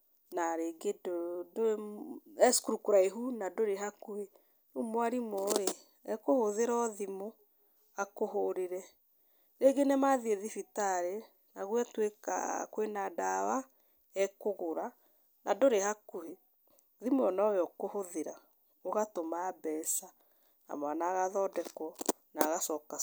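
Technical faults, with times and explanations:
19.84 s, electrical switching spike: a single sharp snap sits on top of the speech at this point, brief enough to register as one event rather than a burst, and peaking at about -30 dBFS. The abrupt, broadband attack with no acoustic decay is characteristic of an electrical transient coupled into the audio line, likely from a nearby switch, motor or static discharge arcing momentarily.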